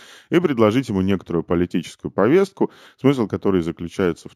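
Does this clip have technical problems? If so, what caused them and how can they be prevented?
Yes. Throughout the speech there is imaging from linear upsampling. The sound was raised in rate by straight-line interpolation, which fits a 16 kHz source converted to 48 kHz. That dulls the top and leaves faint mirrored copies between 8 and 16 kHz, roughly 35 dB down, heard as metallic shimmer on sibilants. Prevent it by using a proper windowed-sinc or polyphase resampler with a steep anti-imaging low-pass.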